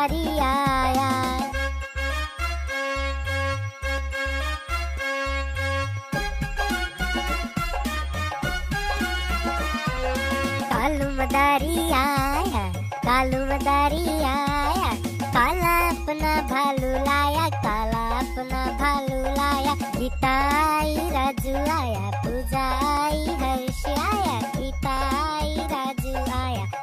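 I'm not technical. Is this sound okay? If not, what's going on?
No. From about 3.98 s to 25.98 s there is a tick roughly once every second. These are periodic USB or driver dropouts. The computer briefly stalls, and about a millisecond of sound goes silent each time, around twenty times.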